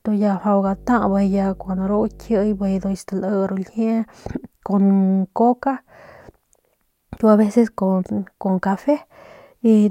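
A steady low drone sits under the speech from 0.67 s to 2.96 s, then stops. It's mains hum at 50 Hz, sitting roughly 25 dB below the speech. The power line is leaking into the signal path, most plausibly through a ground loop between connected equipment or induction from a nearby transformer. The hum's fundamental fixes it to a 50 Hz supply.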